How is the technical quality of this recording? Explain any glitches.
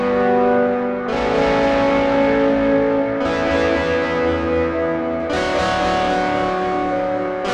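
The recording has one clear fault near its end. From 5.20 s to 7.54 s, the music turns suddenly thin, bright and edgy, with high-frequency detail pushed forward harshly. This is pre-emphasis left on. The treble lift matches the CD 50/15 µs curve, which raises highs before storage and expects a complementary de-emphasis filter on playback. That cut never happened, so about 8 dB of boost at 10 kHz relative to 1 kHz remains in the sound.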